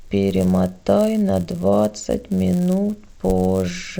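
A steady 100 Hz buzz rides on the speech from start to finish, present wherever there is signal. It comes from the resampler restarting on every block: each 10 ms block was converted from 16 kHz to 48 kHz separately, leaving a small error at every block edge.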